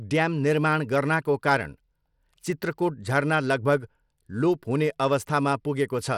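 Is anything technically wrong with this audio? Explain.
Yes. Throughout the speech the treble sounds thin and unsteady: upper detail flickers in and out, a gritty, grainy noise clings to the sound, and there is nothing above about 18.9 kHz. This is likely Bluetooth SBC compression. SBC splits the signal into a few wide sub-bands and shares out bits with no real hearing model. At a starved setting, consistent with roughly 96 kbps, the top bands get too few bits and the rest are quantised coarsely, leaving this audible codec damage.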